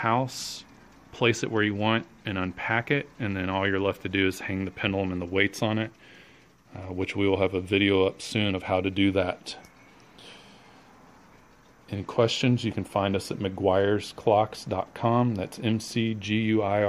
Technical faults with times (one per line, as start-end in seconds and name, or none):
none